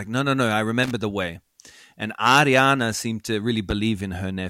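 At 0.83 s a short burst of loose connector crackle breaks into the speech, lasting about 80 ms until 0.91 s. A worn or dirty contact is making and losing connection as it shifts, chopping the signal on and off. On the waveform this shows as jagged dropouts and sharp spikes; on the spectrogram, irregular vertical streaks of broadband energy cut across the speech bands.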